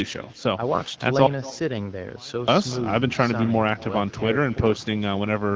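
With no echo canceller at the far end, the loudspeaker playback leaks into that microphone and returns over the network. From the start, every phrase is trailed roughly a fifth of a second later by a thin copy about 21 dB quieter than the speech.

From 1.27 to 2.48 s, an audio dropout to a faint residue takes out 1.21 s of signal, most likely through a break in the transmission path while the input stayed live. The speech cuts off abruptly, leaving only a faint trace around 30 dB down, then snaps back.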